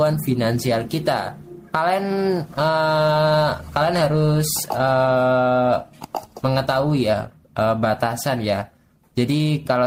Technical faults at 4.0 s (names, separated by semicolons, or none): clock drift between sender and receiver; repeated timing corrections